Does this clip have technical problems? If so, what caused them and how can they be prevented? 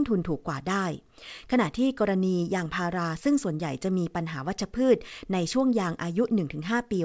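No, this clip has no technical problems, so there is nothing that needs preventing.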